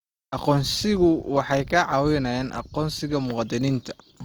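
A speech clip carrying plainly audible Opus compression damage from start to finish. The audio keeps its full bandwidth, with content reaching up to 20.2 kHz, yet the voice sounds grainy and rough, with a noisy texture replacing clean harmonic detail rather than swirling gaps. That pattern fits the codec's music mode filling starved bands with folded or noise content, and it most likely points to a low bitrate around 24 kbps.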